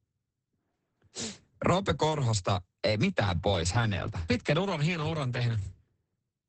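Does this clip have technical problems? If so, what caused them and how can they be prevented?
Yes. Throughout the clip, Opus voice compression in SILK mode removes everything above 8.7 kHz and codes the excitation coarsely. The speech sounds muffled, hoarse and slightly robotic, which points to a rate near 10 kbps. A spectrogram shows a flat ceiling and smeared harmonics. Encoding at a higher bitrate prevents this.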